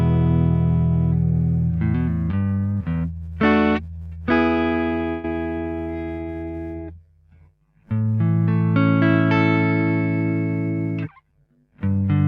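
From 5.09 to 5.25 s a call audio freeze stretches the last sound into a brief fading buzz or hiss for about 145 ms, likely from delayed packets emptying the jitter buffer; unlike a dropout, nothing is lost. From 11.07 to 12.04 s a jitter buffer speed-up runs the audio at 113% by trimming roughly 150 ms of pitch periods, so it sounds hurried but, unlike a faster playback rate, the pitch stays unchanged.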